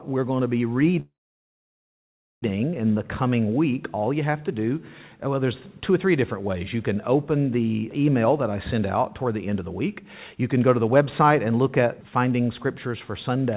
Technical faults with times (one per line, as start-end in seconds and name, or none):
1.00-2.44 call audio freeze
8.74-12.87 jitter buffer speed-up